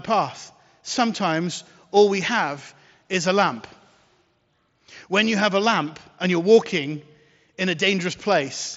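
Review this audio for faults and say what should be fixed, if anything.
Nothing stood out on listening to this speech clip, so there is nothing here that needs fixing.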